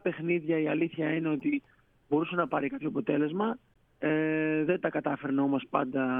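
At 1.40 to 1.42 s and again at 3.74 to 3.76 s, damaged data in a compressed stream causes brief glitches: the decoder misreads corrupted frames and resynchronises. Each shows as a short broadband smear on the spectrogram and a brief disruption in the waveform.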